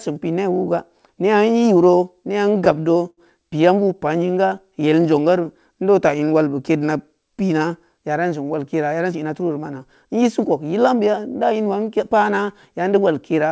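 A speech recording, carried over a call link whose G.722 coding leaves nothing above 8 kHz, shows three timing faults. From 2.49 to 3.20 s the sound catches and hangs four times, drawn out rather than cut, the longest hang lasting 73 ms. These are repeated stalls (stutter): packets arrived late, the jitter buffer emptied, and the receiver stretched the last sound for a total of 102 ms, so nothing is lost but the flow drags. From 3.88 to 6.94 s the speech plays slower, at about 92% speed, with unchanged pitch and elongated sounds. This is a jitter buffer slow-down: running short of audio, the receiver repeated pitch periods and pause fragments to rebuild its reserve, adding 241 ms. From 8.91 to 11.66 s the speech instead sounds hurried, running at about 107% speed at the same pitch. That is a jitter buffer speed-up: holding more audio than its target, the receiver trimmed short pitch-period pieces, roughly a fifth of a second in all, to bring the delay back down.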